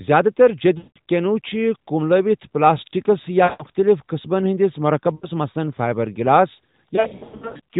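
Lost AMR speech frames break up this speech at 0.78 to 0.98 s (180 ms gone), 3.44 to 3.64 s (160 ms), 5.16 to 5.28 s (60 ms), and 6.96 to 7.60 s, where 480 ms goes missing in scattered runs no longer than 100 ms. Corrupted frames fail their check, so the decoder repeats the last good pitch and vocal-tract settings with falling gain: the longer gaps stretch and fade toward silence. The light narrowband AMR coloring beneath fits the 12.2 kbps mode.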